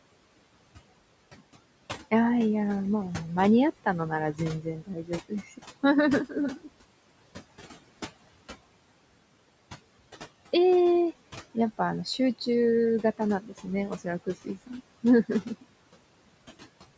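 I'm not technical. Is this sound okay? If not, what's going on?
No. Noise suppressor artifacts run through the whole clip. A filter meant to remove steady background noise turns it down heavily between phrases and lets some back underneath them, and the talking can sound thin and watery.

Speech cut by the noise suppressor happens around 4.62 to 5.59 s, 6.29 to 6.68 s and 13.41 to 13.66 s. In these moments the same filter mistook bits of the talking for background noise and pushed them down, so those short stretches sound faint or swallowed.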